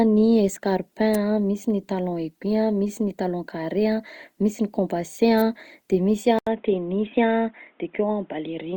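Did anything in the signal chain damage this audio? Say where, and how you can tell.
Yes. Opus compression runs throughout the speech. Content still reaches about 20.2 kHz, but the voice has plainly audible grainy, rough texture rather than swirling holes. That is CELT-mode behaviour: band energies kept, starved bands filled with folded or noise content, likely from a codec stage near 24 kbps.

An electrical switching spike snaps at 1.14 s, and a second sits from 5.38 to 5.41 s, just after "misy ny compensée". These sharp transients ride on top of the sound, likely arcs from a nearby switch or motor coupling into the analogue wiring.

Input switched to a poorer device at 6.39 s and holds to the end. An 80 ms silence marks the change, after which nothing survives above 3.8 kHz and a new noise floor appears around 40 dB down, while level stays roughly unchanged. This likely points to a driver-level handover to a narrower microphone or headset call profile.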